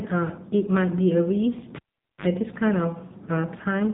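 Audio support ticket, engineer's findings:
AMR narrowband mobile codec across the whole clip: speech is band-limited, nothing above about 3.8 kHz, buzzy and synthetic from heavy coding damage. Sounds like a low AMR-NB mode, which fits roughly 6.7 kbps. Vocal-tract model starved of pulses per subframe.

Cable pulled and plugged in, 1.76 to 2.26 s: pop, then roughly 0.45 s of near silence, then a 50 Hz mains buzz for about 52 ms as the plug tip makes partial contact, then a second pop when signal returns. Probable component: loose or yanked input lead.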